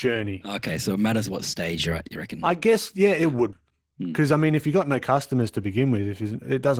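From start to finish the speech carries Opus voice compression, and it is plainly audible. The coder splits the band: a linear-prediction layer models the voice below 8 kHz, and a coarser transform layer fills in the top. The damage fits a starved bitrate of around 16 kbps. Voiced sounds turn hoarse and faintly robotic. Unlike a simple low-pass, the high band is not missing; it sounds thin, approximate and grainy.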